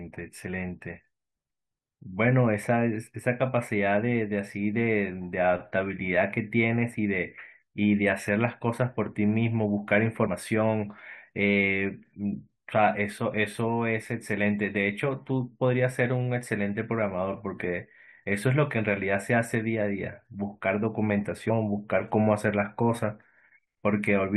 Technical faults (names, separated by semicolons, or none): damaged data in a compressed stream